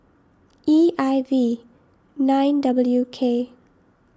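No technical faults can be heard anywhere in this speech.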